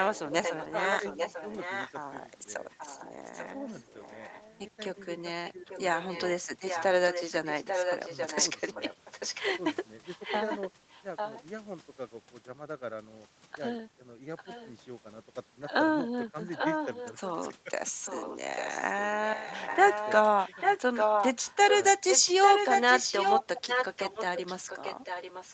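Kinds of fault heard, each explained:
Echo leak: the far-end echo canceller likely let loudspeaker pickup through, so a delayed copy of the speech returns about 845 ms late, sometimes as loud as the original.
Speech suppressed in double talk: with both sides talking, the canceller likely ducked the near talker too, dipping the speech roughly 10 dB at 5.6 and 23.4–23.65 s.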